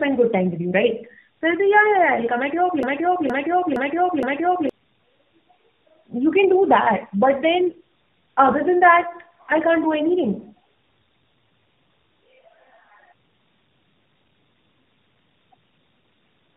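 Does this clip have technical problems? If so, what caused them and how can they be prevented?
Yes. Tandem speech coding runs throughout: the speech has been decoded and re-encoded across two speech-codec stages, with nothing above 3.7 kHz. The second coder works on the first one's degraded output, so the speech sounds rougher, more muffled and more warbly than a single link would. The sound fits an AMR-NB link near 7.4 kbit/s, then a G.711 leg, then AMR-NB again near 12.2 kbit/s. This can be prevented by using transcoder-free operation, passing the coded speech through end to end instead of decoding at each border.

A broken-record loop runs from 2.83 to 4.69 s: a 0.47 s fragment repeats exactly, back to back, four times. The audio that should have played there is lost. The likely cause is a player, encoder or stream that stalled and kept resending its last buffered fragment. Stall detection that outputs silence or concealment instead of repeating stale buffers would prevent it.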